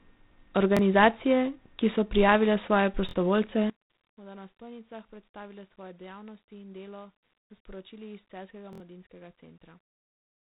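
From start to finish the speech passes through G.726 ADPCM at 24 kbit/s. This codec sends only a few bits per sample, each coding the difference from a predicted value. At this rate there are too few bits, and the damage is plainly audible. A harsh, rasping hiss rides on the voice and rises and falls with its level. The band is cut off near 3.9 kHz, so the sound is dull and telephone-like.

At 0.77 s comes the first repeated buffer. A piece of about 23 ms plays once more. It is heard as a short stutter with a hard join. That length fits a 1024-sample buffer. Fresh audio was late, so the player looped the last block. About 20 ms of speech is lost. Right after "ki so prijavile svoje", at 3.09 s, the same block sounds twice extra, and about 50 ms goes missing.

From 3.70 s to the end, the voice drops by about 22 dB. It becomes a faint remnant. The likely cause is one channel inverted. With one side's polarity flipped, the centred voice cancels when the two channels are summed to mono. 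Only their small differences survive.

Two more repeated buffers fall inside this stretch. At 7.41 s the block plays four extra times and about 100 ms is lost. This is heard as a stutter. At 8.73 s there are three extra plays and about 70 ms goes missing.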